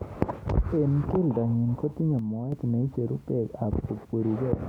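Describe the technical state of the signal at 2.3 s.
At 2.3 s the signal is inside a likely one-channel dropout running from 2.19 to 2.52 s, where one side of the stereo feed goes missing. In the mono sum the speech abruptly falls by about 6 dB, then recovers just before "neicheru bek".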